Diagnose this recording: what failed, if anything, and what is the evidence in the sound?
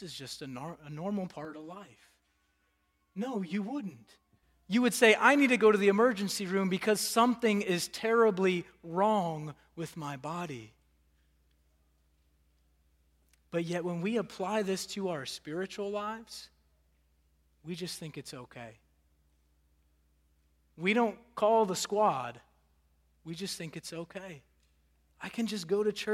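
Between 1.45 and 4.43 s the speech goes hollow and phasey: a channel delay (comb filtering) fault at the driver or buffer stage. One channel lags the other by around 10 ms before the mono sum, so cancellation notches start near 50 Hz and repeat evenly up the spectrum.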